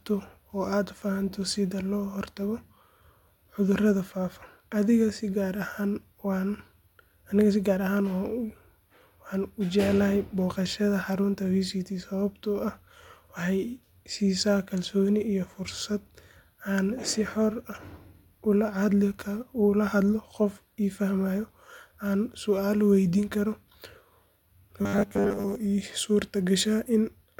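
Robotic sound from repeated short buffers affects this speech recording from 24.82 to 25.55 s, turning the voice into a rigid metallic buzz at 100 Hz. That pitch fits a 10 ms chunk being replayed, likely because new audio arrived too seldom, so most of that stretch is repeated filler.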